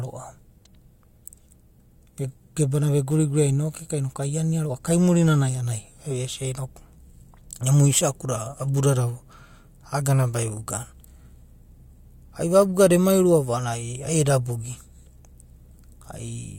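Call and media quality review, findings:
Nothing stood out on listening to the speech in this recording.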